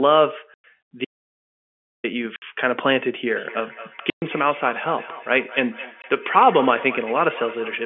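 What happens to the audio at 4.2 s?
The sound drops into a hard-edged 120 ms hole from 4.1 to 4.22 s. This is packet loss filled with silence: lost packets were replaced by nothing, which fits six 20 ms packets. Underneath, a thin, ringing repeat about every 0.2 s, peaking about 18 dB below the speech, has been running since 3.3 s. It is feedback echo between two devices, where one device's microphone recaptures the other's playback.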